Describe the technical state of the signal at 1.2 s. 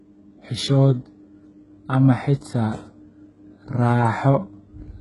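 At 1.2 s, as across the whole clip, the speech shows heavy HE-AAC compression damage, likely from a very low bitrate near 12 kbps. The treble, which stops at 11 kHz, is rebuilt from copied lower bands, so s sounds turn gritty and metallic rather than dull as a plain low-pass would leave them.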